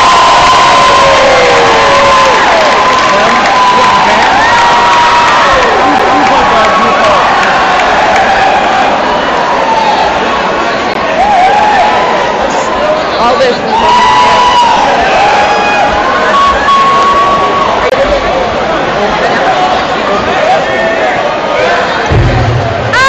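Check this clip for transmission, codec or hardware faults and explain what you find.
There are three CD skips, at 5.99 s, 10.94 s and 17.90 to 17.92 s. Each time the laser jumps to a different turn of the disc's spiral, the player mutes for around 10, 15 and 20 ms respectively, and the sound picks up again from another spot, forward or back.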